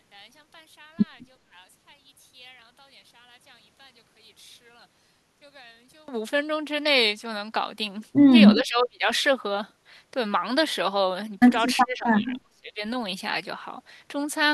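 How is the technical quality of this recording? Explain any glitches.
The recording has two clear problems: a near-dropout at the start and two short gaps in the speech later on.

From 0.00 to 6.08 s, one channel is likely inverted in polarity, so summing to mono cancels the shared speech and leaves it about 27 dB quieter and faint.

From 8.55 to 9.07 s and from 11.83 to 12.81 s, an echo canceller likely suppressed speech during double talk, cutting the voice by around 30 dB into near-silence.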